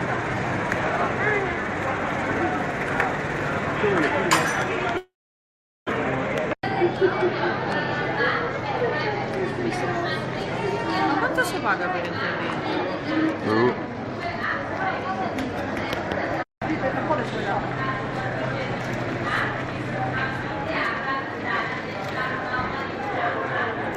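From 4.97 to 5.91 s there is a long network dropout, likely caused by a stall in packet delivery. Nothing reached the receiver, so it stretched the last sound into a fading buzz that gives way to near-silence for about 0.77 s. When audio resumes, roughly 0.6 s of the original is gone for good, and playback now runs around a third of a second behind where it was.

That built-up delay leaves the jitter buffer holding more than it wants, so the receiver starts a jitter buffer speed-up. It cuts short pitch-period slices over and over, from 6.55 to 7.05 s at 119% speed, removing about a tenth of a second. A gentler pass from 13.02 to 14.59 s runs at 105% and trims roughly 70 ms. Pitch stays put in both, but the audio sounds hurried, the first stretch clearly so.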